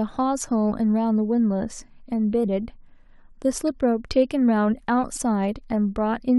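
Right near the end, from about 5.15 to 5.18 s, there's a corrupt frame decoded in this speech: a couple of compressed frames got bit errors and were played anyway, so misread gains smear energy into wrong frequencies, giving a short chirp, squeak, blip or burst of noise peaking around -20 dBFS.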